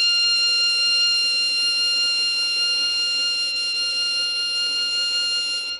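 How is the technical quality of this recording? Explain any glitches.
The recording is degraded throughout by plainly audible codec damage, most likely Bluetooth SBC compression. From start to finish the music carries a gritty, grainy layer, and the treble flickers in and out instead of holding steady. SBC divides the signal into a few wide sub-bands and shares bits among them by a simple rule, with no model of hearing. At a low rate, which here sounds like around 96 kbps, the weak upper bands get too few bits and everything else is coarsely quantised. Content still reaches 20.8 kHz, so there is no fixed low-pass. That rules out a bandwidth-limited MP3 and points to band-by-band starvation instead.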